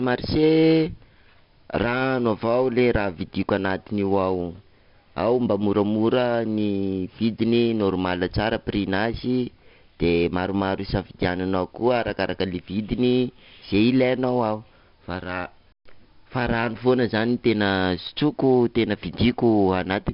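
Throughout, a gritty hiss tracks every loud syllable and nothing reaches above 5.3 kHz: heavy 4-bit ADPCM compression, coarse predicted steps, and a low sample rate.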